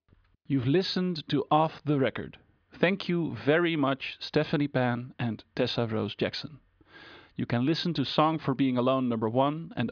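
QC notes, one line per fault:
No faults heard anywhere in the recording.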